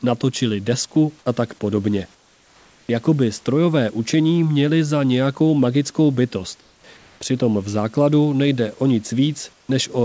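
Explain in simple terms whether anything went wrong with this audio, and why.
Yes, there's comfort noise in place of the background in four pauses: 2.15 to 2.89 s, 6.61 to 6.84 s, 6.97 to 7.21 s and 9.53 to 9.69 s. The real room hiss drops to a flat, slightly quieter fake hiss, likely because the sender stopped transmitting during silence.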